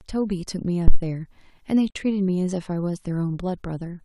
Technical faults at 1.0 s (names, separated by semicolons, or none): phantom power thump